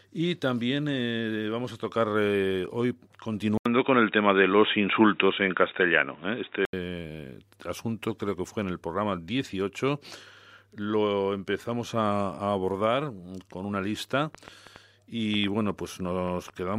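Input switched to a poorer device, from 3.58 to 6.73 s: after an 80 ms gap the speech goes dull and boxy, with nothing above 3.8 kHz, a level shift of a few decibels and a new, faint noise floor, most likely from a change to a narrower-band microphone.

Train of clicks, from 14.35 to 16.75 s, starting just after "abordar con una lista": around ten similar pops arrive at an uneven 4.6 per second, peaking slightly above the speech, likely from electrical interference or a faulty connection injecting repeated pulses.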